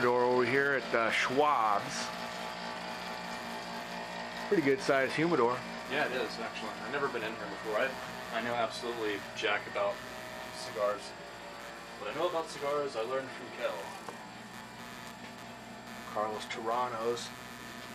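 Throughout, computer activity noise about 20 dB below the signal buzzes at roughly 150 pulses per second as computer load disturbs the shared ground, fluctuating unlike steady mains hum.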